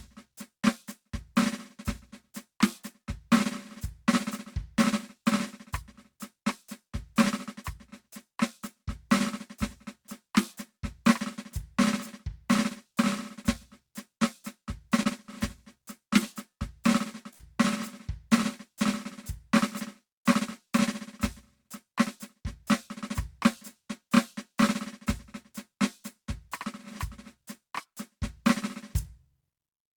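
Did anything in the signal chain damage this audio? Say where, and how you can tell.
Yes. Short concealed packet loss in the network stage: brief smears at 14.17–14.21 s and 15.03–15.07 s, where 14 ms and 27 ms gaps were patched by extending the music, with 20 ms of music missing each time and no silent dropout.

A burst of packet loss at 17.33–17.41 s: the fill audibly holds and fades, and about 60 ms of music is skipped rather than smoothly patched.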